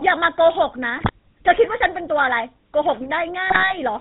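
Throughout, the GSM full-rate codec gives the speech a plainly buzzy, gravelly roughness from its coarse pulse excitation, fitting 13 kbps; the spectrogram shows nothing above 4 kHz. GSM bit errors at 0.96–1.10 s and 3.48–3.78 s corrupt the decoder's filter, pitch and gain values, producing squawks, pops and gargling. They appear as sudden waveform level spikes and smeared, misplaced spectral bands frame by frame.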